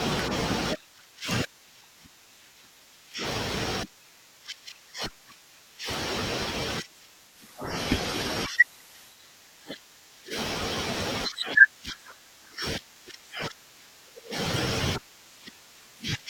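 Speech, with a digital radio blending to analogue fault from 7.25 s to 9.24 s. The receiver cross-fades over 163 ms to the FM broadcast, then back. The FM stretch has hiss roughly 25 dB below the speech, with no change in level.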